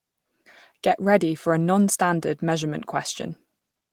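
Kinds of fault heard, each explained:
Nothing stood out on listening to this short speech clip.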